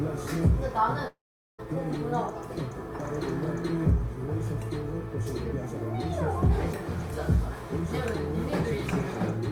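A long network dropout, likely from audio packets failing to arrive, interrupts this recording of sounds from 1.07 to 1.60 s. The receiver covers the gap by stretching the last received sound into a fading buzz or hiss, which decays within a fraction of a second and leaves about 430 ms of near silence. When the audio resumes at 1.60 s, roughly half a second of the original material is simply missing.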